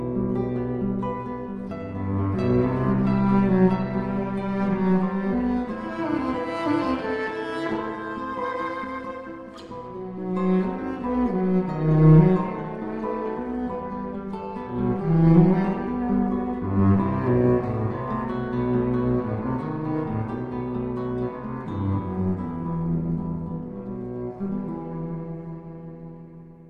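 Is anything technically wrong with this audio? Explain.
Yes. Overlap-add ripple runs through the whole clip. The audio was split into windowed frames and reassembled with an overlap whose windows do not sum to a constant gain, so the level dips and recovers once per frame, by about 6 dB at a rate of around 200 Hz. That fast, regular pumping gives the sound a metallic buzz with extra tones around each note. Unlike mains hum, it adds no steady tone of its own. It only appears as a modulation of whatever sound is present.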